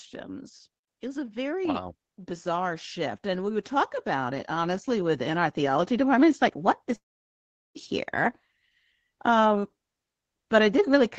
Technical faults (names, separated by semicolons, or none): automatic gain rising; long network dropout